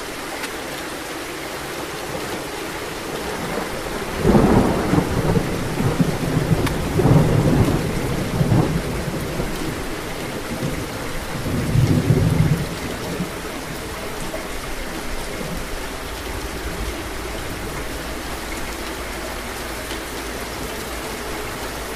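The audio jumps forward three times, the sign of compressed frames skipped: at 0.42 to 0.51 s roughly 50 ms of material vanishes, at 6.67 s about a fifth of a second, and at 20.78 to 20.84 s around 70 ms. Whole frames never reached playback. Unlike a dropout, no silent gap appears and the timeline simply advances.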